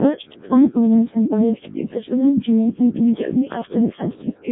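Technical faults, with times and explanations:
Throughout, Codec 2 vocoder: speech is robotic and buzzy, with nothing above 3.8 kHz. It is rebuilt from pitch and envelope alone, fitting a 0.7 kbit/s mode.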